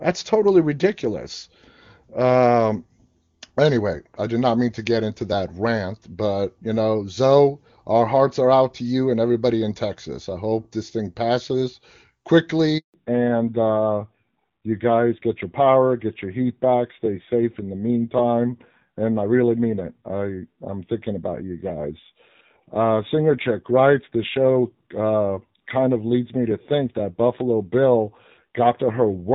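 A phone call recorded as speech undergoes a network handover at 12.78 s, and no speech frames arrive while the link switches. This produces a handover gap: the sound dies within a few tens of milliseconds and stays silent for 160 ms until 12.94 s, and whatever was said then is lost. After the switch the call falls back to narrowband, dropping from HD Voice to an older narrowband codec, at a rate that points to AMR-NB at 7.4 kbit/s. From 12.94 s to the end nothing remains above 4 kHz, leaving the speech duller and rougher than the clear wideband first part, which fits AMR-WB at 23.85 kbit/s.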